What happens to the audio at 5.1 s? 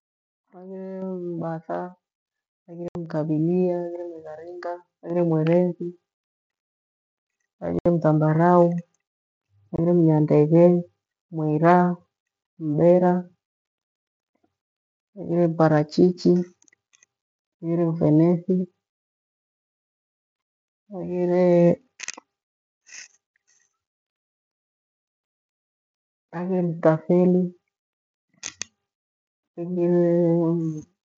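At 5.1 s the microphone volume is stepped up. The call software judged the input too quiet and raised the device's input gain in a single step. The speech and the background noise jump together by about 5 dB and stay louder.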